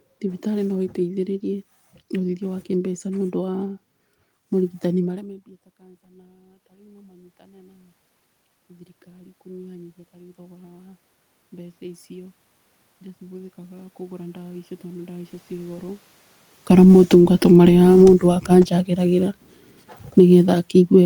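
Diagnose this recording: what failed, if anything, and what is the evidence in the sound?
The automatic gain rising sits in the call processing stage. At about 5.0 s the voice drops by about 24 dB as the talker moves away. Then from 5.13 s to 17.93 s the gain control slowly climbs by about 16 dB. A talker drifting back would bring only the voice up, but here the room noise swells along with it, which shows the level change comes from the processing stage rather than the talker.

The automatic gain falling is also in call processing. Around 16.0 s the talker comes back close while the gain is still raised, so the input arrives too loud. From 16.55 s to the end the gain control pulls the level down gradually. The voice starts loud and then sinks, with the room noise sinking in step. A voice moving away from the microphone would fade without taking the background down with it.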